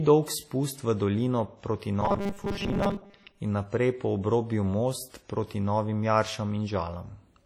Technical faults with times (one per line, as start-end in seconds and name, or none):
0.00-7.45 WMA compression
2.01-3.41 robotic sound from repeated short buffers